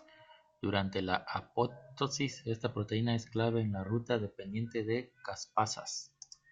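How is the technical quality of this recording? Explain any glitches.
The technical quality of this speech recording is sound, with no glitches to explain.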